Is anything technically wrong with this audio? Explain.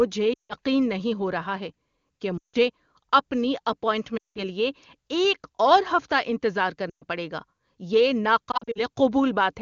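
Yes. The speech has lost AMR speech frames in five places, while the wideband coding around them sounds clean, consistent with a high AMR-WB rate.

Dropouts occur at 0.34–0.54 s (just before "نہیں ہو رہا ہے"), 2.37–2.56 s (just after "ہو رہا ہے کہ"), 4.17–4.39 s (just before "لیے ایک اور ہفتہ"), 6.89–7.04 s, and 8.51–8.83 s. Corrupted frames failed their checks, so the decoder repeated the last good pitch and vocal-tract settings with decaying gain. The 120–180 ms runs smear briefly and fade quickly to silence, and the voice returns weak or rough. The last event is scattered short losses, none over 40 ms, heard as repeated dips and warbles.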